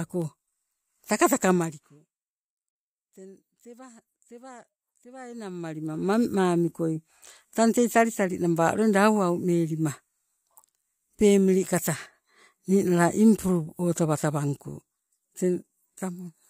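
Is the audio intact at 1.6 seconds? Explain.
No, at 1.6 s you're inside a burst of zipper noise running from 1.52 to 2.04 s. The speech level is being pulled down roughly 25 dB in unsmoothed 1 dB jumps, around fifty a second, and each jump clicks, so you hear a fast ticking zip.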